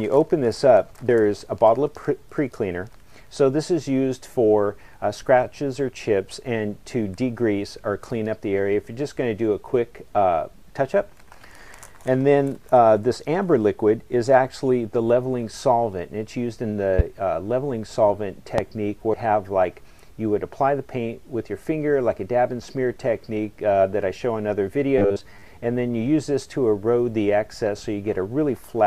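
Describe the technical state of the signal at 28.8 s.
At 28.8 s the signal is intact, with no dropout, distortion, glitch or other fault audible at that point.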